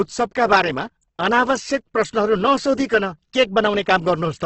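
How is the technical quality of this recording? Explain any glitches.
The quality's pretty rough, and it's down to one problem running the whole way through: likely Opus compression at a very low rate. Nothing reaches above about 8.1 kHz, so the speech sounds narrow and dull, and the codec has filled starved bands with noise, leaving the voice grainy and gritty throughout. That heavy damage fits Opus in its music mode squeezed to around 12 kbps.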